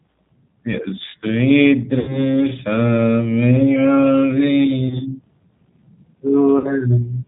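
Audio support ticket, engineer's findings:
G.729 codec, throughout. Band stops dead at 4 kHz, speech rough and a bit synthetic, plainly audible damage. Fits G.729A at 8 kbit/s. The decoder rebuilds each 10 ms frame from a vocal tract filter, a pitch predictor and a handful of pulses, so fine texture is gone and what's left has that coarse, pulse-built grain.

VoIP packet loss concealed by the speech codec, 1.99–2.34 s. About 90 ms missing, which fits three lost packets. Decoder extrapolates from the last pitch and filter, so the sound smears into a buzzy tone or coloured noise that fades, then stays weak after audio returns while frames rebuild.

Same, 4.88–5.01 s. About 30 ms gap, pointing to one lost packet. Short stretched buzz or coloured noise, weak recovery.

Same, 6.58–6.74 s. About 60 ms, likely two packets. Fading buzz or coloured noise, then a sluggish return.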